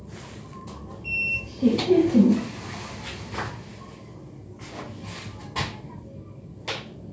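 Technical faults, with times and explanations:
Nothing's wrong with this one, just sounds that went through the usual call microphone processing, which trims the deepest bass and leaves nothing above 8 kHz, exactly as it should.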